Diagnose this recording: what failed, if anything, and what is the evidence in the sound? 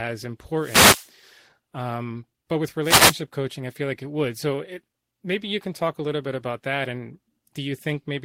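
Two brief swishes of static hit the speech, from 0.56 to 1.11 s and from 2.82 to 3.16 s. They are wireless microphone noise hits in the analogue radio link: reflections cancel the FM signal, and receiver noise surges through the fade.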